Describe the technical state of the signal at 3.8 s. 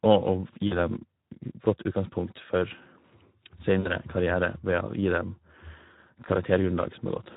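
VoIP packet loss concealed by the speech codec, from 3.79 to 3.93 s: about 60 ms of sound went missing, consistent with three 20 ms frames. The decoder repeated its last pitch and filter with falling gain, giving a buzzy or noise-like, fading stretch that stays weak briefly afterward. Underneath, Speex codec damage is plainly audible, hoarse and noisy, which fits a bitrate around 11 kbps.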